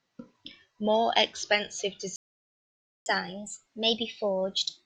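At 2.16 s the speech just drops out and stays silent for about 0.9 s, picking up again at 3.06 s. That's a playback stall, most likely the player running dry or its thread getting blocked, so nothing reached the output until it recovered.

From 3.06 s right through to the end, there's catch-up at higher speed. The player chews through its backlog at 1.1x by resampling, so the talking sounds hurried and sits roughly a semitone and a half sharp, a slightly chipmunky lift, while it claws back some of the lost time.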